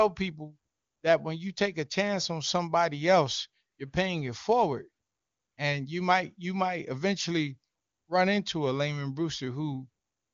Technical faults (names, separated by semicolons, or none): none